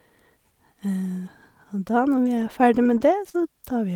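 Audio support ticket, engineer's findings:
Choppy, robotic speech with small pieces missing, 2.23 to 3.36 s. Repeated packet loss in the network or jitter-buffer path: five short dropouts, longest 39 ms. Concealer stretches the preceding sound across each hole, about 85 ms filled in total and around 150 ms reconstructed overall. Repeated synthetic fill gives the mechanical texture. Holes follow closely one after another across the stretch.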